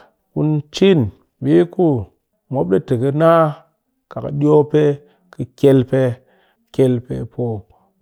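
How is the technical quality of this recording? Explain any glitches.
No technical faults or glitches can be heard at any point in the recording, and the signal stays intact and continuous throughout.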